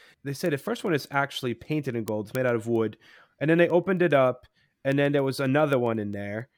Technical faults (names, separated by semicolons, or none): word clock ticks